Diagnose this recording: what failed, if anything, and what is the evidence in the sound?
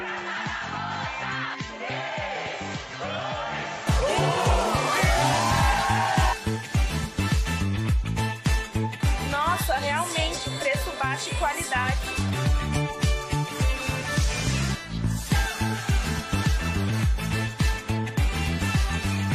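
The opening 3.87 seconds sound like the input switched to a poorer device. It's a capture-side problem, likely at the driver or device-selection stage. Over that stretch nothing reaches above 7.6 kHz, the level sits roughly 10 dB lower, and there's a different background noise, roughly 40 dB down. At 3.87 s the full band and level come back with no gap, which fits the system handing the input from one microphone to another mid-recording.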